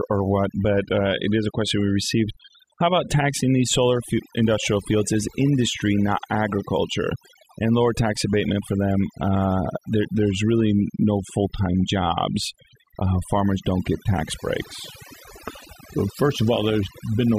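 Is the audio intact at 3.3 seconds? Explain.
No. Overdone noise removal runs through the whole speech clip: bands near the noise estimate are cut away, leaving twinkling specks in near-silence, unlike steady codec smearing.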